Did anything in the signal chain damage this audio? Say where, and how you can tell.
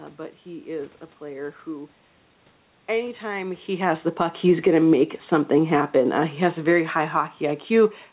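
Yes, at the call-processing stage: automatic gain falling starts at about 2.93 s and continues to the end, lowering the level by about 9 dB. The control judged the input too loud, or its background noise too strong, and kept easing its gain down. The room noise sinks with the speech, which a talker leaning back around 3.5 s would not cause. On the waveform the envelope tapers steadily, and on a spectrogram the whole band, noise floor included, dims together.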